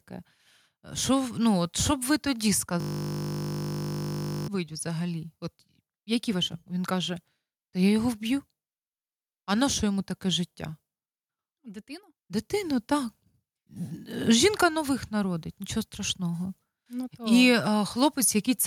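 From 2.80 to 4.48 s there's a system hang loop: the system stalled, and one 20 ms slice of buffer replays dozens of times, a flat 50 Hz buzz.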